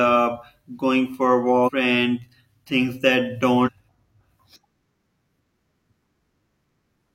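At 1.63 to 1.71 s the speech breaks into a short glitch, and the same thing happens again at 3.63 to 3.69 s. Both are damaged data in a compressed stream. Corrupted bytes left the decoder misreading frames, so it lost sync and hunted for the next valid header, which turns each blip of roughly 70 to 80 ms into garbage. On a spectrogram each one shows as a vertical smear of broadband or blocky energy that breaks the harmonic bands, and the waveform shows an abrupt, irregular break.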